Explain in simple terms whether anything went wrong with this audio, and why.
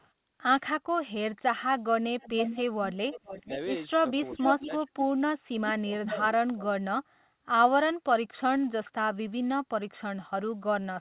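Two things went wrong, both likely caused by one side of the call using a loudspeaker.

Echo leak: the loudspeaker's echo canceller let through some of what its microphone picked up and sent it back, so you hear a delayed copy of the talk. It is very faint at 0.0 to 0.09 s, nearly as loud as the talker from 2.2 to 3.57 s and from 4.25 to 5.14 s, and softer at 5.68 to 5.73 s. The copy trails by about half a second, 0.46 s in the later stretches and 0.39 s at the very start.

Speech suppressed in double talk: while both sides spoke at once, the echo canceller couldn't tell its own talker from the echo and turned both down. Between 4.33 and 4.97 s the voice sinks sharply in short bits, about a fifth of a second in total. From 5.35 to 7.0 s it drops almost to nothing for about a second in total.

The call line itself carries nothing above 4 kHz, which gives the audio its narrow phone sound.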